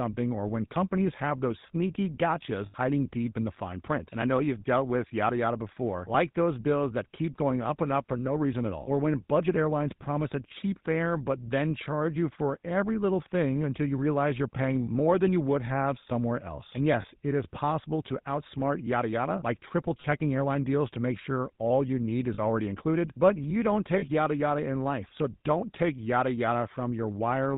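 Throughout, GSM full-rate codec damage gives the speech a buzzy, gravelly roughness, consistent with a 13 kbps stream; a spectrogram shows nothing above 4 kHz. Lost GSM frames at 2.66 s (80 ms), 17.02 s (20 ms), 20.0 s, 22.34 s and 23.98 s (40 ms each) hold the last good frame as a brief metallic ring, seen as smeared, repeated bands.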